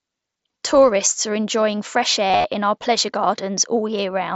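Right after "are enjoying fresh", from about 2.28 to 2.44 s, there's concealed Bluetooth headset packet loss. Headset audio packets were dropped across roughly 165 ms, about 130 ms of it missing in scattered gaps, and the phone patched each hole by repeating the closest-matching bit of recent waveform. The longest run, 45 ms, comes through as a brief buzzy held tone, with a slight warble as real sound resumes before "in our pleasure", all over the wideband mSBC headset link.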